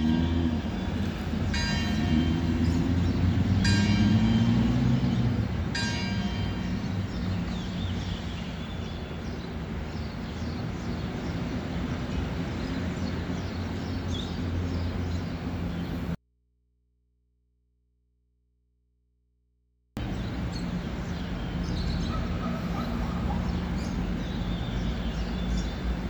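At 16.15 s the sound cuts out abruptly and stays gone until 19.97 s, a gap of about 3.8 s. This is an audio dropout to a faint residue: the wanted signal disappears mid-flow, but the gap is not silent. It holds a low mains hum, roughly 45 dB below the normal level. The likely cause is a brief loss of the source while the downstream input stayed live and picked up hum from the open connection.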